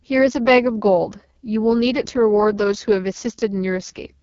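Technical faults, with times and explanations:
Throughout: AMR wideband (HD Voice) codec damage, heavy, with a rough, raspy quality to the speech and nothing above about 6.9 kHz. The lowest-rate mode, likely near 6.6 kbit/s, gives the pulse-driven vocal tract model too few bits, and the noise band from 6.4 kHz is what separates this from plain low-pass filtering.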